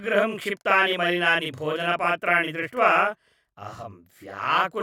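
From start to end, the speech carries a channel delay (doubling). One channel arrives 40 ms behind the other. When both are folded to mono, the late copy sits just behind the original at equal strength. Each syllable sounds doubled, with a short slap trailing it.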